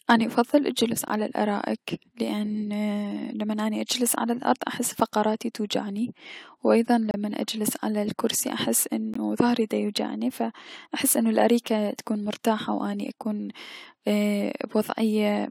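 At 1.08 s, right after "اني افضل الجلوس" and before "على الأرائك لأن", a gap between stream segments drops in 16.7 ms of silence. A second gap follows at 7.11–7.14 s, after "فقراتي توجعني و ايضا", lasting 29.2 ms. A third comes at 9.14 s, between "على الكرسي احس" and "ضهري ديوجعني ف احس", lasting 17.5 ms.

In each case the timestamps of adjacent segments, which fit segments of about 2 s, leave a small hole that the player fills with silence. No audio is lost. Each gap is heard as an abrupt, hard-edged dropout. On the waveform it shows as a flat, silent stretch with sharp edges, and on the spectrogram as a narrow, fully blank vertical strip.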